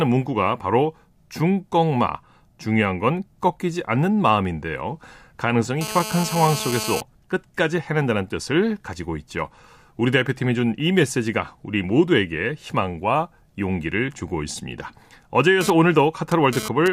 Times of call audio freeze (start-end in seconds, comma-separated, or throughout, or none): none